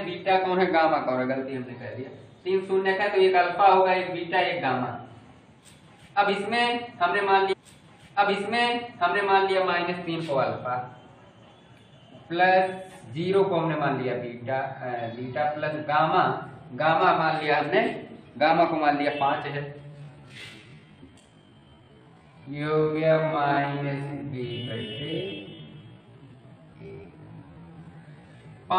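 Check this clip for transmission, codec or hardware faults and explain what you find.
Two faults are present. From 7.52 to 9.52 s a stream segment is repeated: the player queued the same chunk twice, so about 2 s of audio replays after a small blip at the jump back. From 19.80 s to the end there's a time-stretched section, likely from software stretching the audio to about 0.53 times its speed while holding pitch. It sounds abruptly slower and drags.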